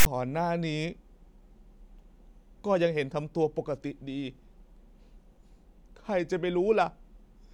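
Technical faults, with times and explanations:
0.00–0.06 s, file tags played as audio: a hard-edged rasp pushed to one side, then silence, as text tag bytes and zero padding are decoded as samples.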